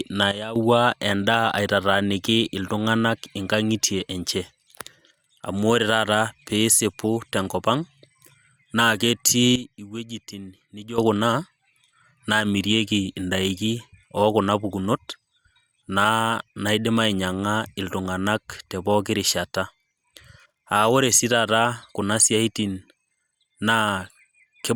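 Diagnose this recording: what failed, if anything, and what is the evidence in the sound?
Sudden gain jump at 0.31–0.56 s and 9.56–10.98 s: speech and noise floor drop together abruptly by about 12 dB, unlike a gradual AGC fade. Likely an unramped digital gain step.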